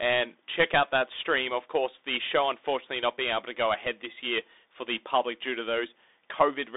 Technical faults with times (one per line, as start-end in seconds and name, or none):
0.00-6.76 Bluetooth CVSD headset codec